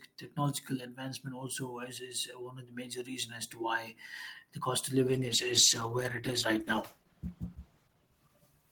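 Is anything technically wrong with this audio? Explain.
Yes. A call bitrate drop starts at 5.09 s, right after "the cost of", and lasts to the end of the clip. The call's bandwidth estimate fell, so the encoder was told to spend far fewer bits. The quality fall points to a drop from about 40 kbps to about 13 kbps, held at the bottom for roughly 2.8 s. With so few bits, the codec quantises more coarsely and trims the high frequencies. The speech turns rough, watery and muffled.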